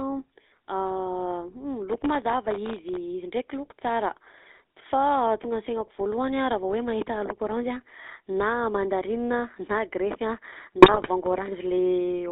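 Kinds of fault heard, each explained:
GSM full-rate codec: a vocal-tract model driven by sparse pulses, at a rate that fits 13 kbps, leaves the speech plainly buzzy and gravelly, confined to roughly 250 Hz–3.7 kHz.
Processor overload crackle: from 1.90 to 2.97 s the processor misses deadline after deadline on sub-millisecond buffers, each miss leaving a silent gap, heard together as gritty tearing crackle.
GSM bit errors: from 10.78 to 11.09 s corrupted bits, around 2 percent, reach the decoder, scrambling filter, pitch and gain values so the speech squawks, pops and gargles.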